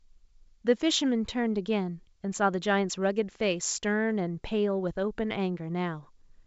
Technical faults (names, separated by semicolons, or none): none